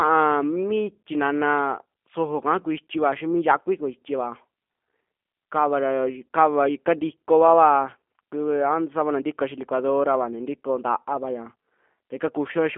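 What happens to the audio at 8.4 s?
At 8.4 s you're hearing G.729 codec damage, which runs the whole clip. The speech is rebuilt from a vocal tract filter, pitch predictor and a few pulses, band-limited to roughly 200 Hz–3.5 kHz. It sounds plainly rough and synthetic, in keeping with an 8 kbit/s codec.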